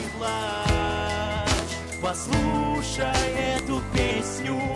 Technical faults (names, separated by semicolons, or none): file header played as audio